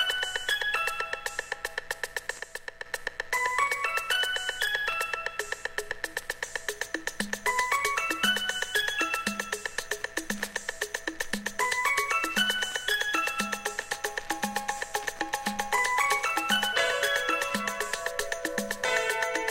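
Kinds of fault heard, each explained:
Mains buzz: A steady, raspy buzz runs through the whole clip, built on 60 Hz harmonics that extend up into the kilohertz range. It sits roughly 25 dB below the main sound and comes from switching spikes entering the signal path twice per mains cycle.
Sudden gain jump: From 2.39 to 2.86 s the sound and its background noise both drop by 5 dB at once, with no fade, then return. The likely cause is a digital gain setting applied instantly, without a ramp.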